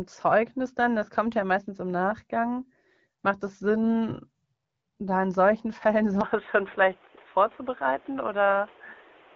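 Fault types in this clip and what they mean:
Input switched to a poorer device: from 6.21 s the sound turns dull and boxy, likely from a change to a narrower-band microphone. A spectrogram shows everything above 3.8 kHz suddenly gone and new noise about 30 dB down. The waveform shows no gap or level step.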